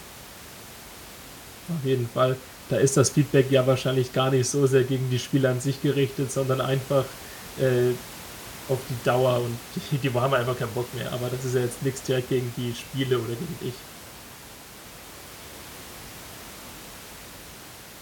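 Nothing goes wrong anywhere in this speech recording; the faint room noise you can hear underneath, sitting about 18 dB below the voice, is just part of the space the microphone was in.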